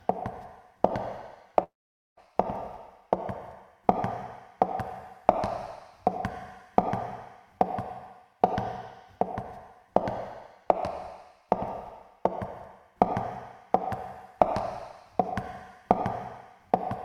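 Between 1.63 and 2.20 s, a likely long network dropout leaves a fading buzz, then 0.48 s of silence. Unlike a brief glitch, 0.54 s of audio never returns.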